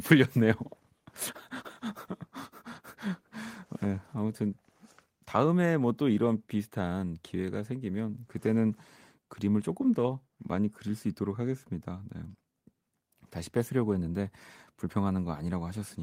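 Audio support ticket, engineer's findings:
No audible faults found.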